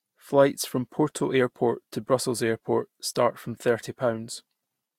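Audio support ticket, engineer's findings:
No audible fault found in the speech recording. No component in the chain identified as a cause.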